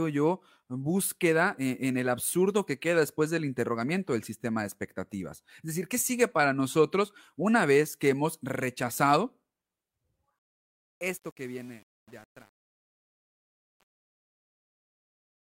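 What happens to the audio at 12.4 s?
At 12.4 s you're right in the middle of truncation distortion on a fade, which runs from about 10.39 s to the end at 15.56 s and is at its worst from 10.67 s on. The speech is fading out, but the fade stage is dropping to too few bits with no dither, which fits an 8-bit path. As the level sinks toward the smallest step, the waveform turns blocky, so the tail sounds gritty.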